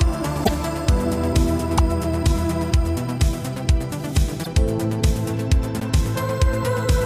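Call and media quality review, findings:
Short disruptions at 0.43–0.49 s, 1.77–1.79 s, 4.43–4.47 s and 5.79–5.81 s, each one to two 26.1 ms frames long. Likely a broken MP3 bit reservoir: after dropped frames, the decoder reads another frame's bytes and the audio jumps ahead. Spectrogram shows a brief chirp, noise smear or gap at a time discontinuity.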